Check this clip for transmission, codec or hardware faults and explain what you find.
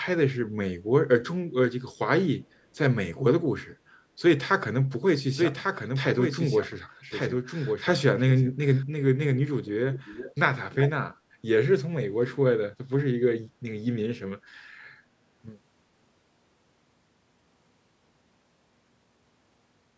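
Two faults are audible in this speech clip: a doubled audio track and an echo leak.

From 5.33 s to 8.83 s there is a doubled audio track. A second full-band copy of the speech runs about a second behind the first, roughly 5 dB quieter. It carries no decay or room colour, and it begins and ends abruptly. The likely cause is the same signal reaching the mix twice, once through a slower path. The result sounds like two identical voices out of step.

From 9.91 s to 10.34 s there is an echo leak. A delayed copy of the speech returns 375 ms after the original, about 15 dB quieter. It is brief, like a faint voice trailing just behind. The likely cause is a far end playing the call on a loudspeaker, where the echo canceller failed to remove all of it before sending it back. The call's microphone processing is audible only as a band that ends at 8 kHz.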